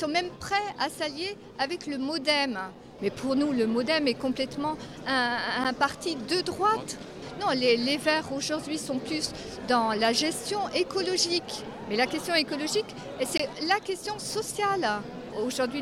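Twice the output buffer likely went unfilled, leaving a block of digital silence: a 10 ms gap at 5.64 s and a 20 ms gap at 13.38 s, the first heard as a tick.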